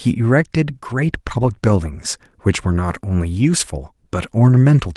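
Nothing goes wrong in this bit of speech: it comes through an ordinary Opus call path doing its usual job, with the top end rolling off around 12 kHz, and there's nothing here worth flagging.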